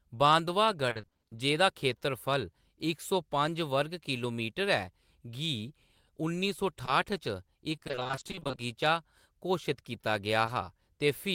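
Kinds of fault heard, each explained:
repeated packet loss (robotic sound): From 0.89 to 1.33 s and 7.75 to 8.59 s, 20 ms holes recur about every 40 ms, so half of each stretch is patched-in continuation. This gives a choppy sound with pieces missing, unlike a single isolated smear.
short concealed packet loss: A lone 20 ms hole at about 6.85 s and another at about 10.45 s are bridged by extending the preceding sound and then blending back. Each is a brief smear or wobble, not a sustained robotic stretch.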